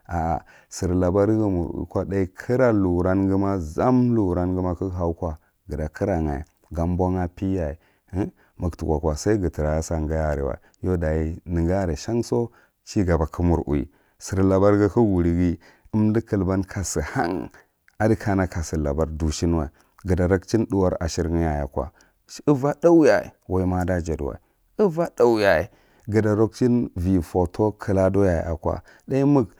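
Nothing in the recording stood out as a technical problem on listening.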